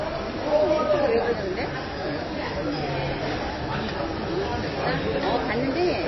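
Throughout, the audio has a hard ceiling at 5.8 kHz, with watery, swirling artefacts, likely from heavy MP3 compression at roughly 22 kbps. On a spectrogram, there is a flat cut-off with flickering gaps below it.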